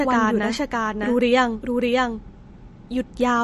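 A second copy of the speech is likely being mixed in by a slower path or an out-of-step edit, producing a doubled audio track throughout. The copy trails by roughly 0.7 s at about 5 dB quieter, full-band and dry, with no decay or room colour, so each phrase returns as a distinct echo.

Also present from start to finish, MP3 compression starved of bits, which fits a bitrate around 40 kbps, has cut everything above 12.1 kHz and dropped weak frequency lines that flicker between frames. The result is plainly audible watery swirl, metallic chirps on s sounds, and smeared attacks.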